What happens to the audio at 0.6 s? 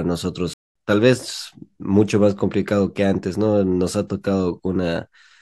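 At 0.6 s the speech is in a playback stall: the output cuts to silence from 0.53 s to 0.75 s, a gap of about 220 ms, before the sound picks up again. The likely cause is the player running out of buffered data or its thread being blocked.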